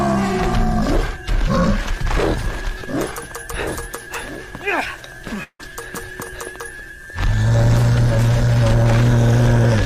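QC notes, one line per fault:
5.43–5.61 s, long network dropout: for roughly 0.18 s the sound gives way to a fading buzz-like continuation of the preceding audio, lasting about 160 ms, of which about 50 ms is silence, before the audio resumes further along, with about 160 ms of material absent. This is likely a stall in packet delivery, with the receiver's concealment extending the last received sound until it runs out and the stream picks up past the lost portion.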